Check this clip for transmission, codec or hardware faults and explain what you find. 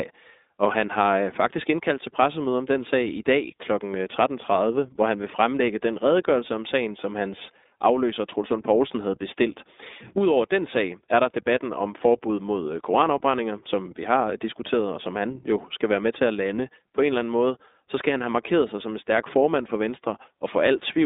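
The speech carries one codec fault, present for the whole clip. The iLBC codec is heard throughout. It codes each 20 ms frame's excitation independently of the previous frame, and the frame-by-frame reconstruction gives the speech a plainly audible rough, slightly synthetic edge. The band runs from about 250 Hz to 3.7 kHz with nothing above 3.8 kHz, so the sound is thin, narrowband telephone audio. The coarseness fits iLBC's 15.2 kbps mode.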